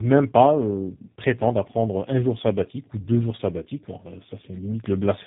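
Throughout, the speech shows tandem speech coding. It sounds like GSM then G.729A coding, each working on degraded audio. It is rough, muffled and warbly, with nothing above 3.8 kHz.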